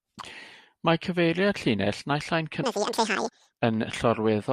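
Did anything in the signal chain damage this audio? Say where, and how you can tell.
Yes. The audio is read two samples at a time (double speed) from 2.63 s to 3.59 s, a fault at the sample-format conversion stage. Across that span the speech jumps an octave, 12 semitones up, and runs twice as fast, then drops back to normal. That points to a reader treating each pair of samples as one frame, as if the data were stereo or twice the sample width. Consumed that way, any strong content above a quarter of the sample rate folds back into the band.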